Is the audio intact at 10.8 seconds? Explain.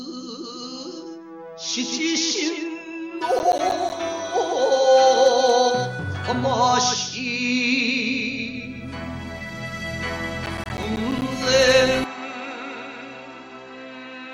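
No. From 10.44 to 11.22 s the sound is torn by a burst of gritty crackle, a rapid run of tiny dropouts with hard edges that stops once the span ends. This is processor overload crackle: the processor fell behind and missed its deadline for roughly fifteen short audio buffers, each around 10 ms long, and every missed buffer came out as a brief patch of silence.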